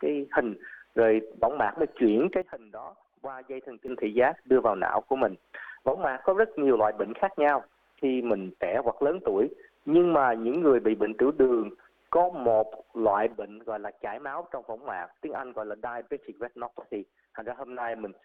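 At 2.42 s the level drops by about 14 dB until 3.88 s, and from 13.34 s to the end by about 10 dB: a sudden gain jump, likely an unramped gain change, with background noise stepping instantly alongside, unlike a fade or compressor.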